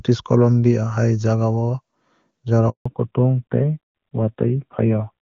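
At 2.70 s the speech cuts out for 160 ms, a handover gap that runs until 2.86 s. The call was being moved from one network link to another, and no speech frames were delivered while the switch took place. The sound falls away within a few tens of milliseconds and stays silent until the new link begins carrying audio, so whatever was said in that interval is simply missing.

From 2.86 s to the end, there is a fallback to narrowband. Before the gap, the speech has the full, clear wideband quality of AMR-WB HD Voice, which fits its top rate of around 23.85 kbit/s. After the handover, nothing above 4 kHz remains. This points to the call having dropped to the narrowband AMR codec, likely at about 7.4 kbit/s, and the speech sounds duller and rougher for the rest of the clip.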